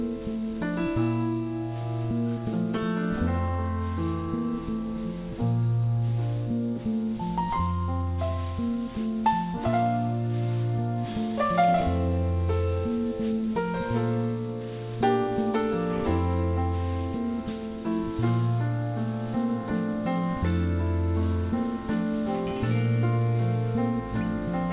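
From start to finish the audio carries aliasing. Content above 4 kHz has folded back below that line instead of being removed, which points to the rate being dropped to about 8 kHz with no anti-aliasing filter first. The folded energy, roughly 30 dB under the signal, lands at unrelated frequencies and adds a gritty, metallic edge to bright sounds. A spectrogram shows energy running hard up to a 4 kHz ceiling, with mirrored, misplaced traces beneath it.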